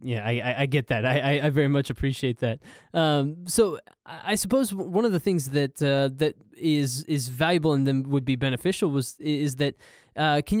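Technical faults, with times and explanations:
No technical faults detected.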